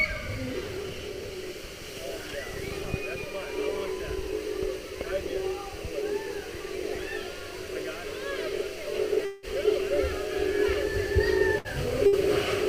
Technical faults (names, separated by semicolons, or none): long network dropout; burst of packet loss